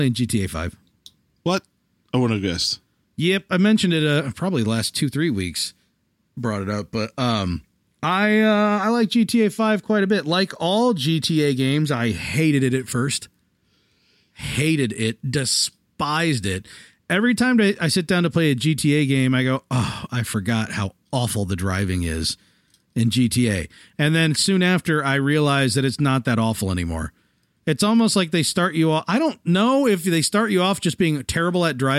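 Nothing goes wrong in this stretch of speech; there's no fault to point to anywhere along the way.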